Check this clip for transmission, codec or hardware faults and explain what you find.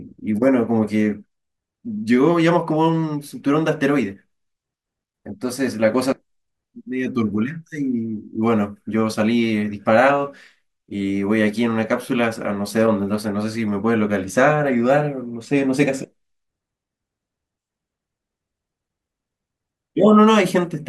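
Nothing in the signal points to a transmission, codec or hardware problem; the speech stays continuous and steady in level, with no audible disturbance anywhere in the recording.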